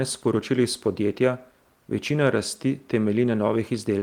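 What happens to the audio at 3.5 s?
Nothing goes wrong at 3.5 s: the speech carries on intact through that moment, with the light Opus voice compression on the clip causing no audible break there.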